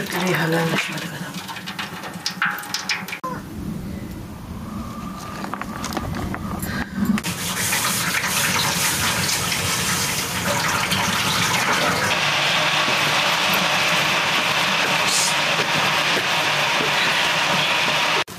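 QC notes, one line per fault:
throughout, gain pumping: the gain is pulled down on each loud sound, by around 10 dB, leaving loud and soft parts squashed close together. The likely cause is input gain set far too high, with a fast limiter clamping down repeatedly.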